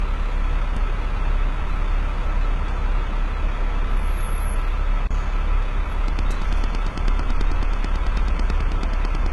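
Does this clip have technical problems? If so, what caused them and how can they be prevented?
Yes, there are three problems.

The whole clip has nothing above 11.6 kHz. That's likely low-bitrate audio saved at a high bitrate: something like a 16 kbit/s HE-AAC source re-encoded as 320 kbit/s MP3, which can't restore what was already discarded. Always work from the original or a lossless copy.

At 5.07 to 5.11 s there's a CD skip. The sound drops out for a brief mute of roughly 30 ms and then carries on from a different spot, which is what happens when the laser jumps tracks on the disc's spiral. Rip with a secure, error-checking ripper from a clean, undamaged disc.

From 6.08 s to 9.27 s a train of clicks ticks along evenly at about 9.1 per second. That's about thirty sharp clicks, peaking around 10 dB over the sound and audible in the gaps too. The likely cause is interference from nearby gear or a faulty connection or power supply. 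Check cabling, grounding and interface buffer settings, and keep noisy equipment away.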